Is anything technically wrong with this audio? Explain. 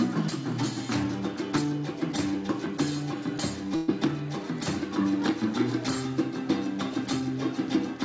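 Yes, there's a burst of packet loss from about 3.76 to 3.90 s. Roughly 120 ms of audio never made it to the receiver in time, so the receiver papered over the hole by stretching out the last bit of sound it had and fading it down. You hear a short held, dimming smear instead of the real material, and then the sound picks up further along with that stretch simply gone. Underneath, the band stops at 8 kHz, which fits a G.722 call path at 64 kbps.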